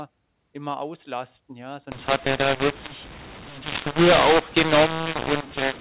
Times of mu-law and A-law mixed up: 1.92-5.81

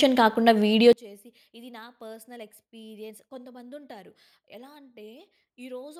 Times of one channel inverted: 0.93-5.99

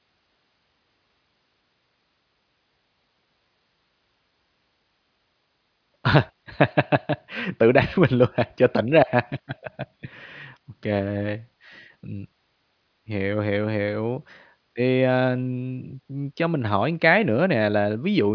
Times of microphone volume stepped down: none

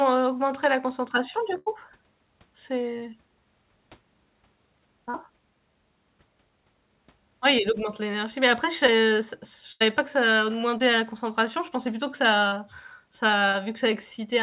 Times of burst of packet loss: 1.58-1.68, 9.72-9.82

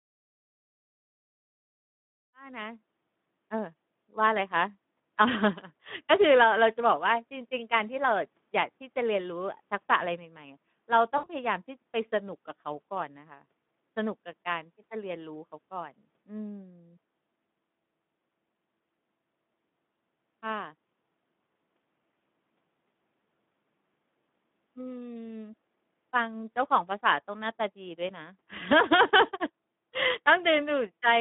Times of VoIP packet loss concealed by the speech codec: 11.17-11.27

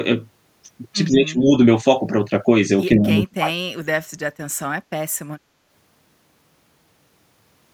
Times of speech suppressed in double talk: 1.10-1.54, 2.96-3.68

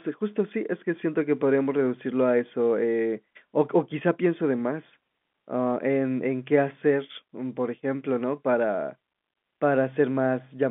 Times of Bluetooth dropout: none

